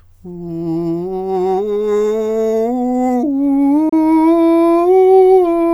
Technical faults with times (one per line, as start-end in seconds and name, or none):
3.89-3.93 Bluetooth dropout